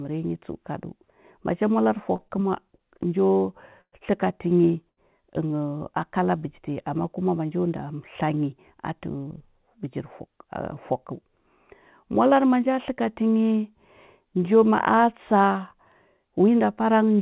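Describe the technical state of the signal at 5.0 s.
Around 5.0 s the call's jitter buffer ran dry: a packet arrived late, so from about 4.90 to 4.99 s the receiver stretched the last received audio to cover the gap, about 76 ms of filler, then resumed where it left off, with everything after sitting 76 ms later. This is a short stall from a late packet. Nothing is lost, but the speech holds one sound unnaturally long with a faint buzzy, flattened quality, within the G.711 line's 4 kHz band.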